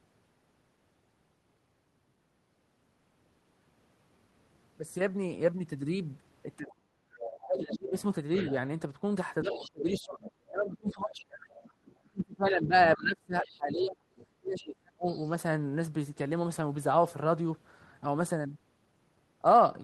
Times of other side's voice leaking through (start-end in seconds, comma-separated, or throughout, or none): 7.24-8.51, 9.52-10.31, 10.89-10.93, 11.64-11.95, 13.44-13.49, 14.16-15.31